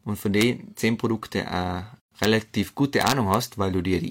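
At 0.41 s there's a violent crack, which is integer overflow: a peak only about 1 dB over the limit wraps to the opposite sign instead of being held. At 2.0 s the speech cuts out for about 115 ms, a gap at a join of encoded pieces where leftover encoder delay and padding sit between separately encoded chunks. The overflow cracks come back at 2.24 s and again across 3.01 to 3.34 s.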